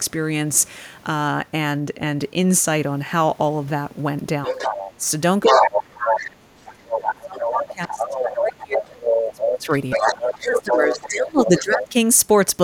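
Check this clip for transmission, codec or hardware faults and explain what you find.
Two echo-related faults appear in this speech clip.

Other side's voice leaking through at 4.44–4.91, 5.45–6.14, 6.68–8.78, 9.15–9.43, 9.90–11.09 and 11.41–11.86 s: the far voice comes through at or just below the talker's level, likely residual loudspeaker echo the canceller missed.

Speech suppressed in double talk at 4.48–5.01 s (moderate dip) and 5.49–11.96 s (deep): the talker fades while both sides speak, likely the canceller attenuating everything.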